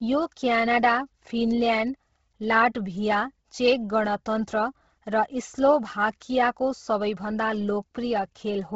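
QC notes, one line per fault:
Throughout: Bluetooth LC3 compression. The speech has a breathy, grainy edge and sounds heavily damaged. Nothing reaches above about 7.7 kHz, so the top is dull, and the sibilants come out smeared as hiss rather than crisp detail. This is likely the low-rate LC3 codec, around 16 kbps, which discards much of the upper spectrum in 10 ms frames and fills the gaps with noise. On a spectrogram there is a hard ceiling near 7.7 kHz and speckled, blocky texture below it.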